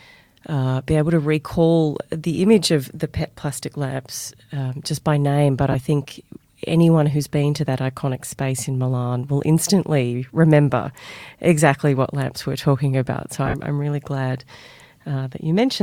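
Speech with lost LE Audio frames at 5.72–5.75 s, where about 22.5 ms of sound is missing (consistent with three 7.5 ms frames), and at 13.46–13.54 s, where 60 ms goes missing in patches with the longest run about 50 ms. Unlike a hard dropout, the gaps are filled in: the decoder keeps replaying the last spectrum with scrambled phase, so voiced sound smears into brief noisy hiss that fades over the longer break. The light codec softening elsewhere is ordinary compression and is distinct from these smears.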